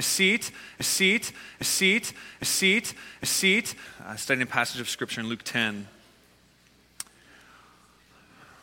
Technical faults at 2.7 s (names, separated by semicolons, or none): broken-record loop